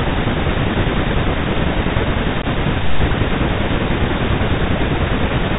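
From start to finish the speech carries a Bluetooth CVSD headset codec: everything above 4 kHz is gone, s sounds turn scratchy, and a fine granular hiss sits under the voice. This fits a 64 kbps CVSD link, where each sample is coded as a single up-or-down bit with an adapting step size, so loud bright moments outrun the step and distort. Plain low-pass filtering would sound dull but clean. This has the grainy texture of step-size noise.

Between 2.42 and 2.45 s there is unconcealed Bluetooth headset packet loss. About 15 ms of signal, roughly a couple of short voice packets, never arrived, and silence or an idle pattern filled the gap. The result is a brief hole with hard edges, and the speech returns quieter for a moment as the codec's step size rebuilds. A concealed loss would be smoothed over, and a dropout caused by clipping or a gate would not come with this recovery dip.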